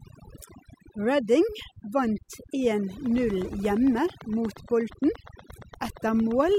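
Throughout, the background of the speech is near-silent with twinkling specks. This is overdone noise removal. The reduction was set so strong that frequency bands near its noise estimate were cut almost to nothing, and the quieter detail of the voice went with them.

From 3.06 s to 6.56 s, a steady ticking runs over the speech and its pauses. There are about thirty clicks at a regular 8.6 per second, peaking roughly as loud as the speech. This train of clicks likely comes from interference from nearby equipment or a faulty connection or power supply.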